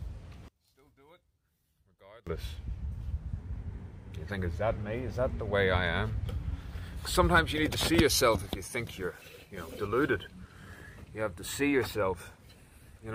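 From 0.48 to 2.27 s the sound drops by about 30 dB, leaving only a faint residue. This is likely one channel inverted: with one side's polarity reversed, everything common to both channels cancels when they sum, so only their small difference remains.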